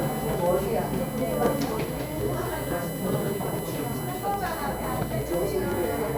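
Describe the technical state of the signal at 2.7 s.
USB whine is present at 2.7 s and through the whole clip: current drawn by the USB bus in 1 ms frames leaks into the audio through power or ground. The result is a fixed-pitch whine built on 1 kHz, loudest at its 12 kHz multiple, sitting about 15 dB below the sounds.

At the same moment, periodic USB or driver dropouts are running from 0.09 s to 6.09 s. Something blocks the bus or driver every 0.125 s and about a millisecond of audio is replaced with silence each time, giving an even train of ticks, eight per second, over the sounds.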